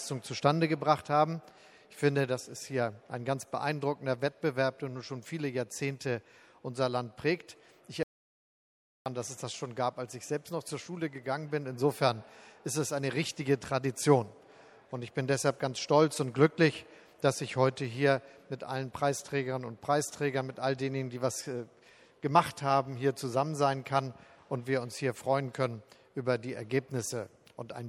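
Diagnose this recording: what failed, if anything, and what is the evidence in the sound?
Codec stage. The damage is plainly audible throughout. Weak detail flickers in and out, and the texture turns watery and swirly. Attacks smear. The likely cause is MP3 compression, and the damage fits a bitrate around 64 kbps.

Input or connection stage. From 8.03 s to 9.06 s the sound stops dead. The gap lasts about 1.03 s and is silent, with no room tone. This is an audio dropout to silence. The recorder kept writing silence, likely after the input link briefly failed.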